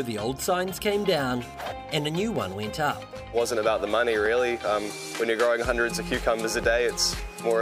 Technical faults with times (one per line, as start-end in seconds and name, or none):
0.46-6.16 clock drift buffer slips